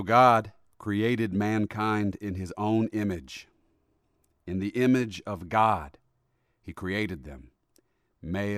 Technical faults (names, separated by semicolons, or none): none